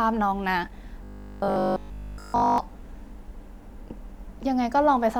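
Robotic sound from repeated short buffers runs from 1.04 to 2.58 s in this speech clip: the voice collapses into a rigid, metallic 50 Hz buzz, likely because audio arrived too slowly and a 20 ms fragment was looped over essentially the whole stretch.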